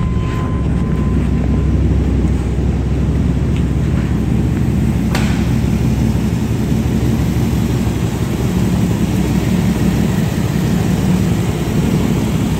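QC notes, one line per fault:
No faults heard in this clip.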